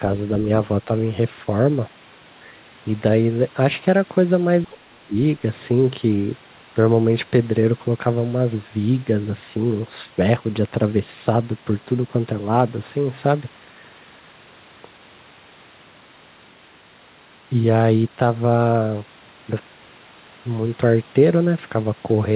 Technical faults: speech suppressed in double talk

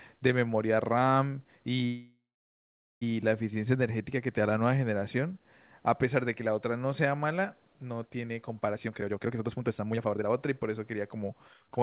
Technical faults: call audio freeze; jitter buffer speed-up

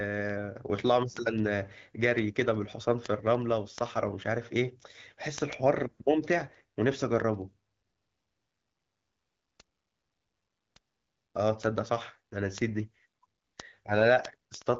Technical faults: word clock ticks

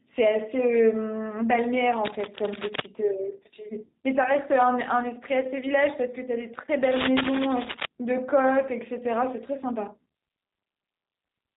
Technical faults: G.729 codec; cable scratch noise; VoIP packet loss concealed by the speech codec

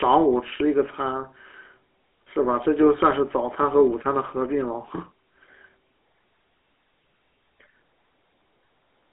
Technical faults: GSM full-rate codec

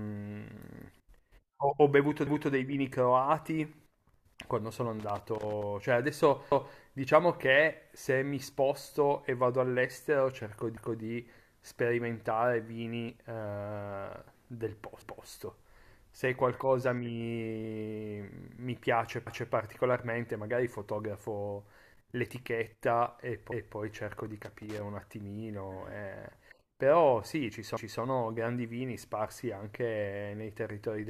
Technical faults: overlapping chunks; loose connector crackle

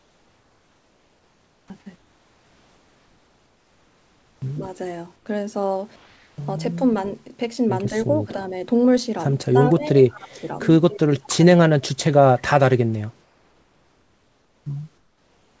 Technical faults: comfort noise in place of the background; speech suppressed in double talk

